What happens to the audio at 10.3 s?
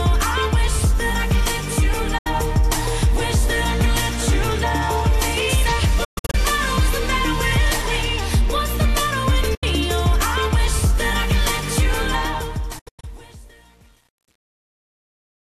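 Nothing goes wrong at 10.3 s: the audio there is intact, with no dropout, click, distortion or level change.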